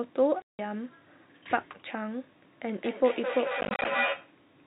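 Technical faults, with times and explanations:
0.42 to 0.59 s: packet loss filled with silence. A 170 ms hard-edged gap, fitting 10 ms packets; it shows as a flat waveform and an empty spectrogram column.
2.61 to 4.41 s: feedback echo between two devices. Sound recurs about every fifth of a second, nearly as loud as the original, piling up as stacked, ringing copies on the spectrogram.
3.61 to 3.85 s: packet loss filled with silence. About 120 ms of short dropouts, none longer than 30 ms, are scattered across 240 ms, appearing as thin blank slivers with abrupt edges.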